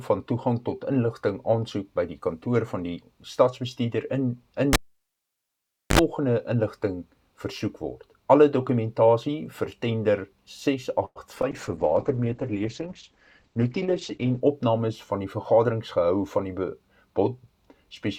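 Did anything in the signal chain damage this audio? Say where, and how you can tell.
Yes. At 4.73 s the sound cuts off with a pop and drops to near silence for about 1.21 s. A short burst of 50 Hz mains buzz lasting about 63 ms comes just before a second pop, and the audio returns at 5.99 s. This is a cable pulled and plugged in, a fault in the analogue wiring. The live connector was removed and reinserted. The buzz came from the tip touching first, before the ground made contact.

From 11.05 to 11.18 s the sound stretches into a fading tail, goes fully silent for about 50 ms, then resumes exactly where it stopped with nothing lost. This is a call audio freeze at the network stage. The likely cause is that packets stalled in transit and the jitter buffer ran dry. The receiver padded about 102 ms of filler, and the playback delay grew by the same amount.

Two brief smears follow, from 11.36 to 11.38 s and from 11.42 to 11.45 s. 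Each one is a small wobble where 20 ms of audio is missing. This is short concealed packet loss, also from the network. Those packets never reached the decoder in time. The receiver filled each hole by continuing the preceding sound and then blended back into the real signal. In the first gap the playback delay also shrank slightly.

From 11.53 to 14.48 s the sound turns rough, watery and dull. This is a call bitrate drop at the codec stage, driven by the network. The encoder fell from 128 kbps to 9 kbps and stayed at the lowest rate for about 2.87 s. At that rate the coding is coarse, and the audio bandwidth narrows from 20 kHz to 8 kHz, which removes the top end.

From 14.27 to 15.72 s the sound hurries at an unchanged pitch, running at about 107% of normal speed. This is a jitter buffer speed-up in call processing. The buffer held more audio than it aims for. To bring the delay back down, the receiver cut many short pitch-period slices, removing about a tenth of a second in total.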